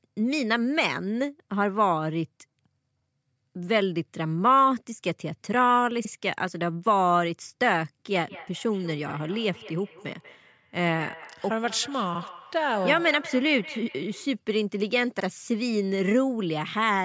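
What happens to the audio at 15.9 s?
Nothing goes wrong at 15.9 s: the speech there comes through intact, with only the normal band limit of call microphone processing, which leaves nothing above 8 kHz and trims the lowest bass.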